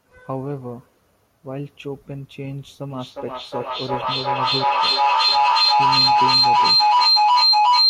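A speech clip with feedback echo between two devices, from 2.9 s to the end. Each phrase comes back at a steady interval of about 0.4 s. The repeats get thinner and more ringing each time round. They do not die away. They pile up until the loudest reaches about 13 dB above the speech. Two devices in one room are on the same call. One device plays back what the other's microphone sent. That microphone picks it up again. Each echo canceller only removes its own device's playback, so the loop keeps building.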